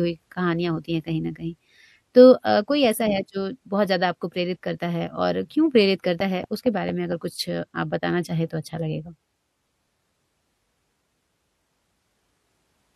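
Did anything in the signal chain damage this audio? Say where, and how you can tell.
Yes. A train of clicks from 6.20 to 7.13 s, most likely interference coupling into the analogue wiring or a struggling interface, injects about five evenly spaced pulses at 4.4 per second. They tick over the speech, peaking about 5 dB above it.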